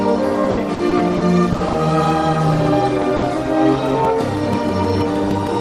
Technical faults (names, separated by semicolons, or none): repeated packet loss (robotic sound); short concealed packet loss; burst of packet loss